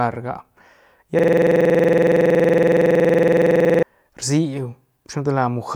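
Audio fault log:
1.19–3.83 s, system hang loop: the same 46 ms slice of speech repeats about 57 times at 21.5 Hz, a harsh rattling stutter. The host froze while the audio hardware kept cycling its ring buffer, which fits a 2048-sample buffer.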